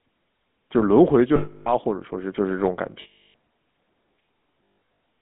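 Throughout, the speech has the buzzy, gravelly roughness of the GSM full-rate codec. It is plainly audible, fits a 13 kbps stream, and passes only 200 Hz to 3.6 kHz. From 1.36 to 1.74 s and 3.02 to 3.35 s, lost GSM frames repeat the last good frame. Each gap becomes a rough metallic ring. From 4.65 to 4.78 s, shorter scattered losses ring briefly, the longest run about 150 ms.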